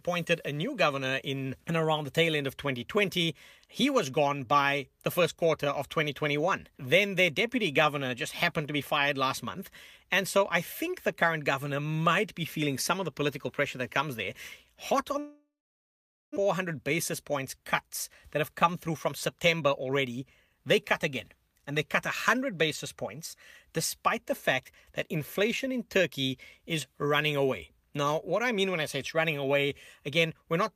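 At 15.19 s the speech gives way to a fading buzz, then about 0.85 s of silence until 16.38 s. This is likely a long network dropout, losing about one second of speech. From 18.36 s to 20.57 s a jitter buffer speed-up trims pitch periods. Speech runs 6% faster at unchanged pitch, sounding slightly hurried.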